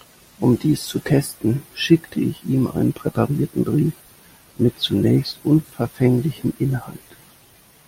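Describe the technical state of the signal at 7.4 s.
At 7.4 s the speech signal is intact, with no audible technical fault at that moment.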